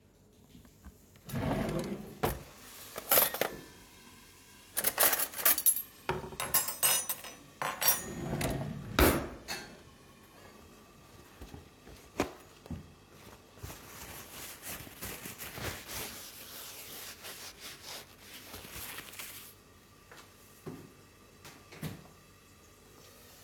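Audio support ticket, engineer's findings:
Audio drops about a semitone flat (roughly 111 cents) and runs 6.2% slow, then snaps back, at 3.45–5.04 s, 9.06–10.38 s and 17.26–18.08 s. Likely a drift correction step: clock-sync software lowering the playback rate in one jump to refill its buffer.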